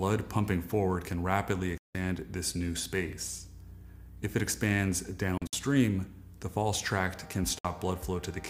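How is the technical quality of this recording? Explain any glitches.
The recording has three gaps where the sound cuts out. These are likely Bluetooth dropouts: audio packets reached the headphones too late and were discarded, leaving silence. Playback then resumed further along, as if it had continued unheard. The first hole runs from 1.78 to 1.95 s, losing 168 ms. The second, from 5.38 to 5.53 s, breaks into several short holes totalling 93 ms, the longest 56 ms. The last, from 7.59 to 7.65 s, loses 56 ms.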